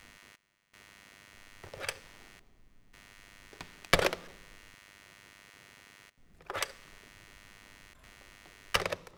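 From start to finish, computer activity noise sits under the sound: a buzzy chirping around a hundred pulses per second, roughly 20 dB below the signal. Processor or graphics load is disturbing the audio circuit's shared ground, so unlike steady mains hum, the buzz tracks the computer's activity rather than staying constant.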